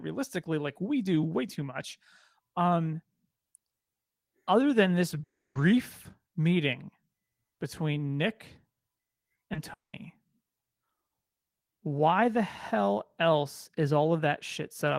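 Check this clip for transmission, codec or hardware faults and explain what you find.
The clip has two kinds of network fault: two long dropouts and a pair of brief concealed losses.

Long network dropout, 5.23 to 5.57 s (right after "other than this") and 9.73 to 9.95 s: the speech cuts off. The last sound trails on as a fading buzz that gives way to near-silence, about 310 ms of it in the first gap and 180 ms in the second. Speech then resumes with roughly 320 ms and 200 ms of it gone. The likely cause is a run of packets that never arrived, so the receiver extended the final sound briefly and then had nothing left to play.

Short concealed packet loss, 9.35 to 9.39 s and 9.53 to 9.57 s: each is a quick smear or wobble in the speech, just ahead of the second dropout. About 20 ms of audio missed the decoder each time. The receiver patched the gap by carrying the preceding sound forward and then crossfading back into the real signal. 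Because the patches are so short, they come across as brief blurs rather than breaks.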